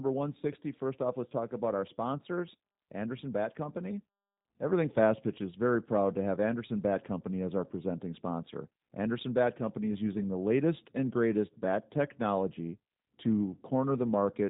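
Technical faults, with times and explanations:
Throughout, G.729 codec: the whole speech clip has that thin, slightly buzzy phone-line quality, with nothing above about 3.8 kHz, so sibilants lose their bite. The codec doesn't store the waveform. It rebuilds each short frame from a vocal-tract filter, a pitch predictor and a handful of pulses. That sparse excitation is where the rough, synthetic edge comes from, and the damage is plainly audible. The sound fits an 8 kbit/s stream.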